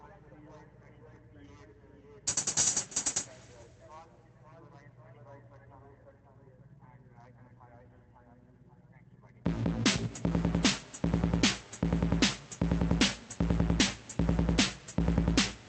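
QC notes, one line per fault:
No faults heard in these sounds.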